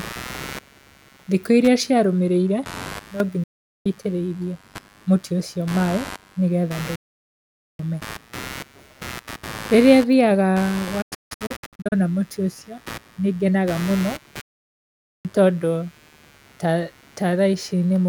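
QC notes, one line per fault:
Throughout: computer activity noise. A buzz pulsing at about 100 Hz sits roughly 20 dB below the speech, rising and falling with the machine's load rather than with the talker. Processor or graphics current is disturbing the shared ground of the audio circuit.
2.99 to 3.20 s: sudden gain jump. Speech and background drop together by about 12 dB in a single step, with no ramp. The likely cause is a digital gain setting applied instantly, so both layers move at once.
3.43 to 3.86 s, 6.95 to 7.80 s, 11.02 to 11.93 s, 14.41 to 15.26 s: digital broadcast dropout. The sound fades out over about 8 ms and stays muted while frames fail. The holes last about 0.42 s, 0.83 s, 0.58 s and 0.83 s. Near 11 s the loss is scattered over 0.9 s in short holes, the longest 160 ms. That pattern fits 32 ms frames. Everything sent during each gap is lost.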